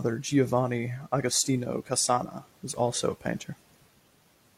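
No technical faults can be heard anywhere in the recording. There is nothing in the audio that calls for a time mark or an explanation.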